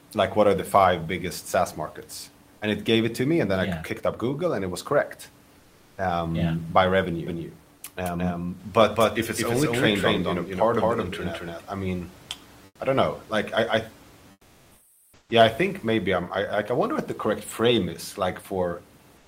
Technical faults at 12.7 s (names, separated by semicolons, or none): comfort noise in place of the background